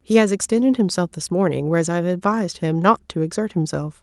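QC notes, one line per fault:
No fault found.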